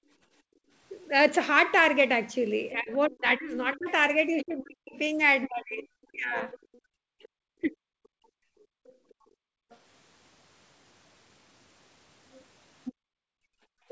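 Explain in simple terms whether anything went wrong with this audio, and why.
Several things went wrong, and all of them come from the echo canceller in a call.

The first is background gated by the echo canceller. The room sound behind the talker drops away sharply and then returns. This happens from the start to 0.72 s, from 6.8 to 7.11 s, from 8.64 to 9.7 s, and from 12.93 s to the end. Each time, the canceller turned the microphone down hard because the loudspeaker was playing. The quiet lasts about as long as each of those stretches.

The second is the other side's voice leaking through. A second voice can be heard underneath, from 2.72 to 7.28 s, from 9.1 to 9.77 s, and from 12.32 s to the end. In the first and last stretches it is fairly easy to hear. Around 9 s it is very faint. This is likely sound from the talker's own loudspeaker that the canceller failed to remove from the microphone.

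The third is speech suppressed in double talk. Between 2.74 and 8.36 s, the talker's voice keeps dipping and cutting out. Some of those dips go very deep. In total about three seconds of speech are affected. Both sides were likely talking at once here. The canceller could not tell its own talker from the echo, so it pushed both down.

The sound also stops around 8 kHz. That is the normal limit of this kind of call line and not a fault.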